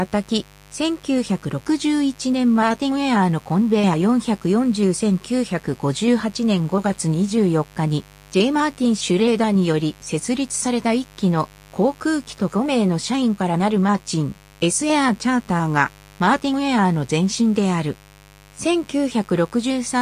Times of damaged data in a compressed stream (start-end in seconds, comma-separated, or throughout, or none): none